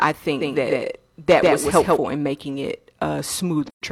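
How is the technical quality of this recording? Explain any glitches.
The recording has two distinct glitches.

From 0.41 to 2.01 s, just before "in making it", a doubled audio track appears: an equally loud copy trails about 150 ms behind, likely from a second capture path. On a spectrogram, every pattern repeats shifted right, with abrupt edges.

From 3.67 to 3.82 s there is AAC frame loss with muting: zeroed frames leave a soft-faded 128 ms gap, which fits three lost frames. The waveform tapers to silence and back.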